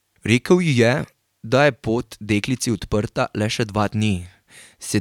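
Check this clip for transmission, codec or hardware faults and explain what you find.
No fault turns up anywhere in this speech recording; the signal stays continuous and intact throughout.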